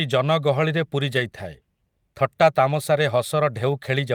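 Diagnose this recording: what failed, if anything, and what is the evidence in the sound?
The network dropped a couple of packets, and you're hearing a lost packet rebuilt from error correction. Just after "ଜନଗହଳିରେ ପୂରି", from 1.15 to 1.21 s, there's no gap, but roughly 40 ms turns grainy and noisier, which fits two packets replaced by the low-bitrate backup copies carried in the following packets.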